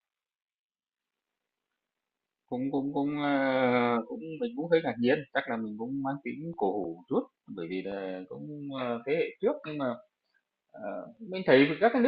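Speech recording, no technical faults detected.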